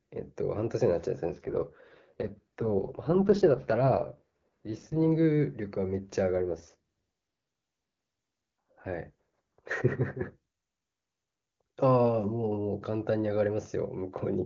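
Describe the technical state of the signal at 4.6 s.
At 4.6 s you're inside an AMR rate drop running from about 1.30 to 5.06 s. The link steps the wideband codec down to a low mode, which fits a fall to around 6.6 kbit/s, spending bits on protection instead of detail. The band doesn't narrow, but the speech turns rough, raspy and synthetic until the rate recovers.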